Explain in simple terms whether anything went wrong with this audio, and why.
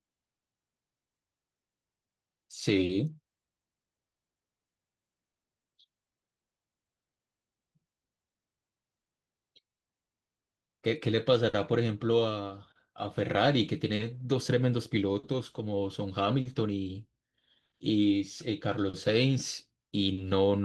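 There is clock drift between sender and receiver: the sending device's clock runs a few percent slower than the receiving one, so the receiver keeps running short and briefly repeating or stretching bits of sound. You hear small, unevenly spaced timing hiccups throughout the speech.

There are also scattered short gaps: about fifteen pieces of the signal went missing or arrived late between 0.37 s and 20.19 s. Each hole, the longest about 40 ms, was patched by continuing the previous sound, leaving brief ticks and smears.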